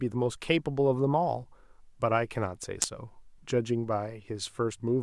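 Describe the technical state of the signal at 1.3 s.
At 1.3 s the audio is intact, with no fault audible at that moment.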